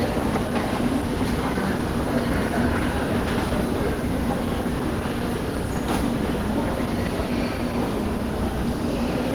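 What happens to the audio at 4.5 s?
At 4.5 s the sound carries Opus compression, which runs through the whole clip. It was likely encoded at a very low rate, around 16 kbps, with the encoder in its hybrid mode, which codes the lower band with a speech-style model and fills the upper bands coarsely. The bandwidth still reaches about 20.1 kHz, but the damage is plainly audible: the sound comes across muffled, hoarse and grainy, with rough, noisy texture where cleaner detail should be.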